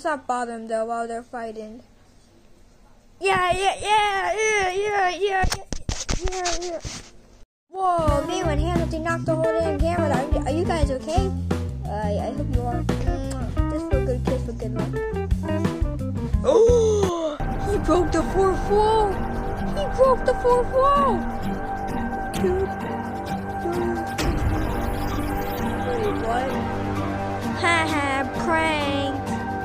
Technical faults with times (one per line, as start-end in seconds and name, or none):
21.16 dropped samples